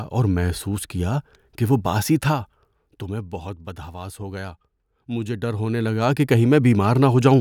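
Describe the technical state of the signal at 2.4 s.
At 2.4 s the speech signal is intact, with no audible technical fault at that moment.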